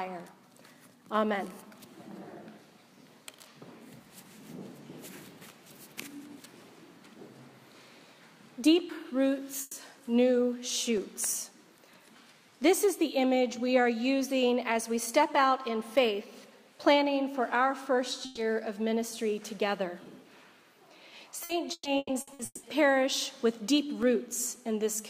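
At 9.61 s a burst of packet loss hits: for about 120 ms the receiver stretches the last sound into a held, fading tone, then jumps ahead with 120 ms missing. It is one continuous smear rather than clicks, which separates it from the ticks that follow.

From 10.97 to 12.05 s come CD scratch ticks: five tiny clicks, each only a few milliseconds long, spaced regularly at roughly four per second, one for each turn of the disc over a blemish the error correction could not rebuild. Their periodic rhythm marks them as disc damage, not network loss.

At 18.25 s a second burst of packet loss repeats the pattern, with about 120 ms held and faded and then a skip forward.

Between 21.43 and 22.66 s, repeated packet loss gives a robotic sound. Six gaps, the longest 180 ms, are each patched by continuing the previous sound, and they cover about half the stretch. Unlike a single burst, the holes keep recurring, so the audio turns choppy.

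From 23.76 to 24.56 s, four more CD scratch ticks return at a similar regular spacing, each very brief, around a millisecond or two.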